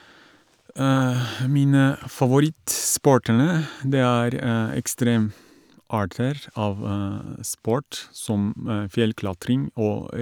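No technical faults can be heard anywhere in the speech recording, and the signal stays steady and continuous throughout.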